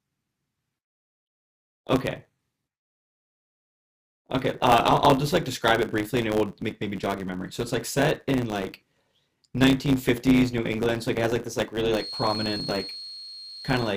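From the first moment to the last, the speech carries a block size mismatch (truncated) fault. One stage hands on blocks that fit 512 samples, and the next keeps only the front of each, dropping the tail. The splices leave a steady 100 Hz buzz, and the speech runs 1.07 times fast at near-normal pitch. A spectrogram shows vertical striations every 10 ms, and the waveform shows small step discontinuities at the same spacing.

At 11.87 s a feedback whistle enters and lasts until the clip ends. A thin, steady 4.3 kHz tone sits about 15 dB below the speech and swells and fades slowly in level. The likely cause is a loudspeaker-to-microphone loop poised at the edge of feedback, sustaining one frequency without building up. On a spectrogram it appears as a narrow horizontal line at 4.3 kHz, while the waveform barely shows it beneath the speech.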